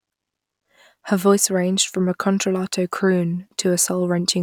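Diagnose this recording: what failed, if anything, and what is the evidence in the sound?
Nothing in the recording points to a failure at any stage; the speech signal is continuous and intact, with no audible disturbance at any point.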